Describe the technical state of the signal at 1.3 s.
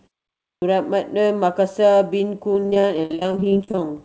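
At 1.3 s the speech signal is intact, with no dropout, distortion or other fault, only the usual band limit of the G.722 call path, with nothing above 8 kHz.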